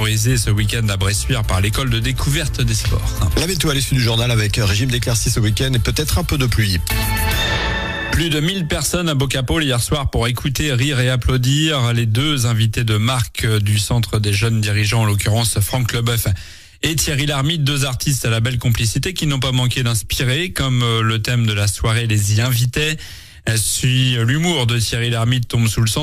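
No technical faults are audible anywhere in the recording.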